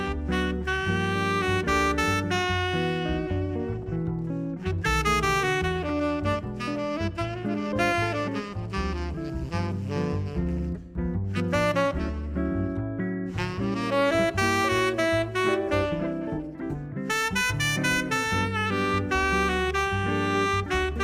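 No technical faults can be heard anywhere in the audio.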